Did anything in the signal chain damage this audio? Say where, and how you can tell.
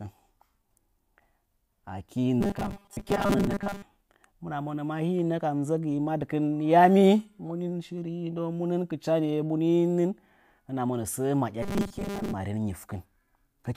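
Yes. Robotic sound from repeated short buffers occurs at 2.41 to 3.82 s and 11.63 to 12.34 s, after "monə səə". A likely starved driver or buffer stage loops a 5 ms chunk in place of most incoming speech, forcing a rigid 200 Hz buzz. Spectrograms show flat harmonics every 200 Hz. Waveforms show identical repeating cycles.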